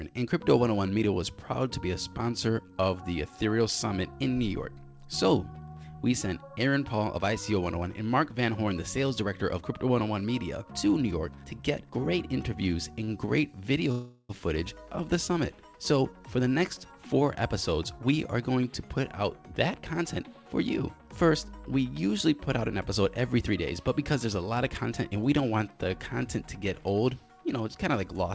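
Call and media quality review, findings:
Short stall from a late packet, 13.04–13.10 s and 13.26–13.30 s: jitter buffer briefly ran dry, receiver stretched the last sound 37 ms and 19 ms. Sound held, slight buzz, nothing lost.

Call audio freeze, 13.92–14.31 s: packets likely held up in transit, buffer emptied, 376 ms of stretched fill inserted. Sound continues as a fading buzz, no silence, then resumes where it stopped.

Jitter buffer speed-up, 16.01–20.24 s: buffer over target after the backlog, receiver trimmed short pitch-period pieces, about 0.3 s in total. Sound runs at 107% speed, same pitch, noticeably hurried. Band limit at 8 kHz consistent with the G.722 call path.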